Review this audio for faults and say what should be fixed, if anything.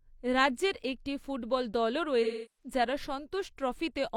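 AAC frame loss with concealment from 2.23 to 2.72 s: the decoder repeats the last good spectrum, so the speech smears and decays toward silence before fading back, fitting roughly eight lost frames. A spectrogram shows frozen, blurred bands thinning out, and the waveform envelope sags. Stronger error protection or retransmission on the transport link would prevent it.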